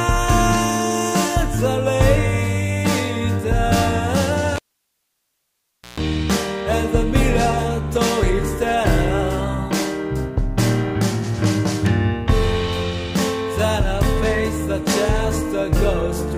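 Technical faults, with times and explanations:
4.56 to 6.0 s, cable pulled and plugged in: a live connection is broken and remade, so the signal path opens with a pop at 4.56 s and the sound drops to near silence for about 1.39 s. As the plug goes back in, only its tip touches at first, so the open input picks up a burst of 60 Hz mains buzz lasting about 142 ms. A second pop follows as full contact returns the sound.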